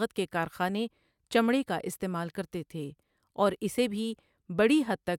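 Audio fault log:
No technical fault can be heard anywhere in this speech recording, and the signal holds steady with no break or disturbance along its whole course.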